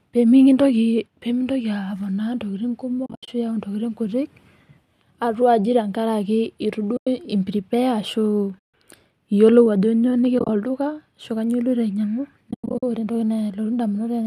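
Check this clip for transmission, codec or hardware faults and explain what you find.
The speech has five soft-edged dropouts, all of them AAC frame loss with muting. They fall at 3.06 to 3.28 s, 6.97 to 7.07 s, 8.59 to 8.74 s, 10.39 to 10.49 s and 12.51 to 12.83 s. The sound fades out and back in. At 3.06 s, 10.39 s and 12.51 s the holes break into a flutter of short gaps, spread over 220 ms, 100 ms and 320 ms, and none of the unbroken stretches is longer than about a tenth of a second. The lost frames were decoded as silence. Because neighbouring frames overlap, the muting ramps in and out rather than cutting hard. The gap lengths fit frames of about 10 ms, which matches the low-delay AAC compression that is likely in use here. That codec adds only a faint roughness.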